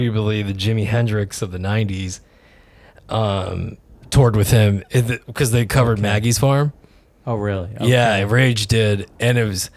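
Nothing in the speech recording stood out as a technical fault on listening.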